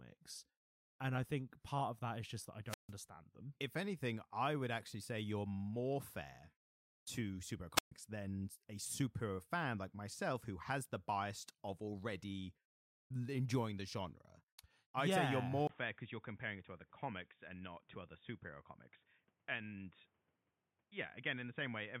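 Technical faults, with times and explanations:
2.67–2.93 s and 7.75–7.92 s, wireless microphone squelch dropout: after "is just that I" and again after "more fair to superhero", hiss swells as the radio link fades, then the receiver's squelch mutes the output for about 150 ms and 130 ms, with the sound returning on "than a superhero fan".
15.67 s to the end, input switched to a poorer device: after a 20 ms gap the sound turns dull and boxy, with nothing above 3.7 kHz, a few dB quieter, and new background noise roughly 40 dB down. The likely cause is the recording switching to another microphone or a headset's narrowband call mode.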